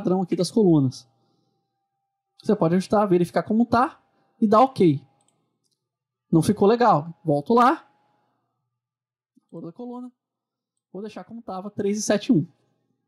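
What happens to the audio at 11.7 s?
A level change of about 15 dB is being applied in unsmoothed 1 dB steps, around 50 a second, from 11.39 to 12.05 s. That is zipper noise: each jump leaves a small click, so a fast ticking rides on the sound as it moves.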